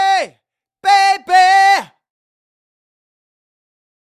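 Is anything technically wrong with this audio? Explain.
No, nothing technically wrong can be heard in this audio. There is no fault to point to at any moment in the clip.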